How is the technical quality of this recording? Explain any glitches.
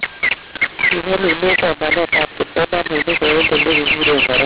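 The technical quality is poor: one fault runs through the whole clip.

Mu-law and A-law mixed up, throughout: the telephone audio was written with G.711 mu-law but decoded as A-law. The two laws map the 8-bit codes to different amplitudes, so every sample lands at the wrong level. Some peaks come out too loud and others too soft, and the quietest samples are raised well above silence. The speech sounds harsh and distorted, and the pauses fill with a noise bed. The band stops below 4 kHz, which fits 8 kHz telephone sampling.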